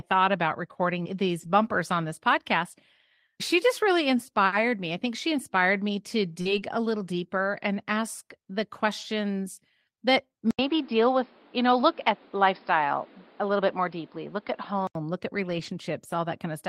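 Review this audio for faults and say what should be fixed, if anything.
Four brief rough, grainy patches sit at 1.39–1.45 s, 6.45–6.55 s, 9.01–9.03 s and 15.49–15.71 s, with no dropout in any of them. Each is a lost packet rebuilt from error correction: packets went missing, but the following packets carried low-bitrate copies, and the decoder played those instead. The patches last 40, 60, 20 and 120 ms. Reducing network loss, or adding jitter buffering, would keep the full-quality frames arriving.

At 6.41–6.47 s there is a short smear, a 40 ms stretch where the sound carries on artificially before the rebuilt audio above takes over. This is short concealed packet loss. Those 40 ms never reached the decoder in time, so the receiver extended the last sound to bridge the hole and then blended back. Because it runs straight into the error-corrected stretch, the whole region from 6.41 to 6.55 s sounds unsteady. 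Better network stability or a deeper jitter buffer would prevent it.

From 10.51 to 14.95 s the sound turns dull and narrow. Nothing above about 5.3 kHz remains, a new background noise sits roughly 30 dB below the signal, and there is an 80 ms silence at the switch point. Loudness barely changes, and the original clarity returns at 14.95 s. The likely cause is the input switching to a poorer device, such as another microphone or a headset call profile with a narrower band. Locking the input to the intended microphone for the whole recording would prevent this.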